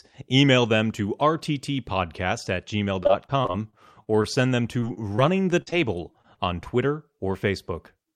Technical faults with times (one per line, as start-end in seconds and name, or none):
3.03-4.26 repeated packet loss (robotic sound)
4.80-4.84 short concealed packet loss
4.94-4.98 short stall from a late packet
5.16-5.20 short concealed packet loss
5.62-5.68 burst of packet loss
5.70-5.74 short concealed packet loss
6.12-6.68 repeated packet loss (robotic sound)